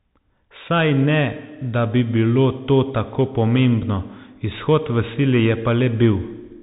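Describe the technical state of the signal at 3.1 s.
At 3.1 s the speech is passing through a Bluetooth CVSD headset codec, present for the whole clip. A one-bit delta coder, fitting a 64 kbps link, tracks the waveform with adaptive steps, so nothing above 3.8 kHz survives, sibilants turn scratchy, and granular hiss sits underneath.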